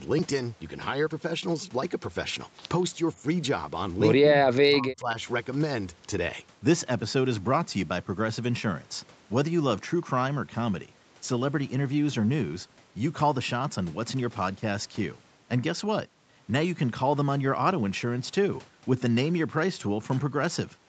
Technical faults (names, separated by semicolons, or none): speech suppressed in double talk